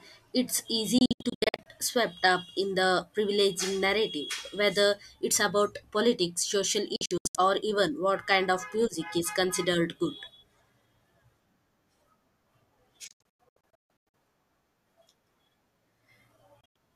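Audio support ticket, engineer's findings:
Digital broadcast dropout: receiver lost lock or rejected corrupt frames and muted. Speech breaks into short silent holes with about 3 ms fades at 0.98–1.66 s (384 ms lost), 6.96–7.35 s (240 ms), 13.08–14.14 s (624 ms, longest gap 144 ms), 16.61–16.76 s (120 ms).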